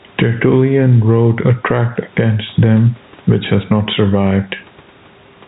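Gain pumping runs through the whole thing, start to finish. The gain gets pulled down when the talker gets loud, swinging by something like 10 dB. That's likely the input gain cranked far too high, with a fast limiter or compressor slamming it down on each loud syllable. The result is squashed speech with loud and soft parts pressed close together, heard through the narrow telephone-band G.711 sound.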